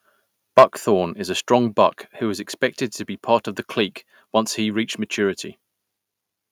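From 0.57 to 0.64 s the loudest peaks turn harsh and crackly, likely microphone overload: input about 6 dB too hot, flattening roughly a tenth of samples, unlike codec smearing. At 0.59 s the sound and background drop together by about 2 dB in one step, likely the microphone volume stepped down by software, distinct from a gradual fade.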